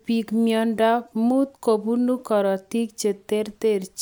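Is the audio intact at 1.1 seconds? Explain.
Yes, at 1.1 s the speech plays through cleanly with no dropout, click, distortion or other audible fault.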